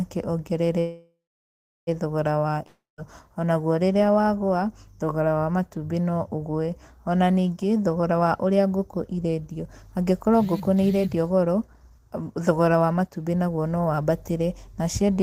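Call audio freeze, 0.79 to 1.89 s: the speech stops and the last sound carries on as a fading buzz, then about 0.71 s of silence, before the audio resumes exactly where it left off. That pattern points to packets likely held up in transit, leaving the jitter buffer empty. The receiver bridged roughly 1.08 s this way, so nothing is lost, but the rest of the clip now plays that much later.

Long network dropout, 2.66 to 3.00 s: again the last sound is stretched into a decaying hiss, settling into about 0.18 s of silence, and speech returns at "onaguo rĩrĩa wagũa thogora". Here the break likely comes from audio that never reached the receiver. About 0.32 s of the original speech is skipped rather than delayed, so the talk jumps forward past the lost piece.

Jitter buffer speed-up, 7.96 to 8.27 s and 9.51 to 14.11 s: the speech runs about 11% fast in the first stretch and 10% fast in the second, with pitch unchanged, so it sounds hurried. 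Too much audio had built up in the buffer, and the receiver cut many tiny pitch-period slices to shrink the delay. That removes only a few hundredths of a second in the first stretch and roughly half a second in the second.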